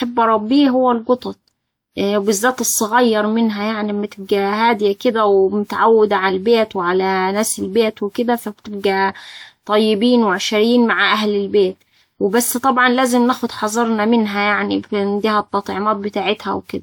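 From start to finish, the speech has a swirly, smeared, hollow quality, with consonant attacks blurred more than a 128 kbit/s WMA-style encode would explain on its own. That's generation loss, most likely from the audio going through a lossy codec about four times, each pass requantising on a shifted frame grid so the noise and spectral gaps pile up. The top end runs out cleanly at about 20.1 kHz.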